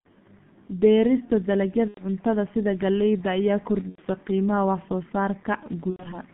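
Throughout, the speech carries heavy G.723.1 codec damage at about 6.3 kbit/s. The band runs only from 150 Hz to 3.5 kHz, and the slowly updated voice model leaves it muffled and hoarse with smeared consonants. Unlike the concealment bursts, this damage is constant rather than episodic.

VoIP packet loss concealed by the speech codec strikes at 1.88–2.01 s, 3.89–4.01 s and 5.90–6.22 s. Each loss spans about 90 ms, which fits three lost 30 ms frames. The decoder stretches its last pitch and filter into a fading buzzy tone or coloured noise, muted from the third lost frame, and the distortion lingers after packets resume.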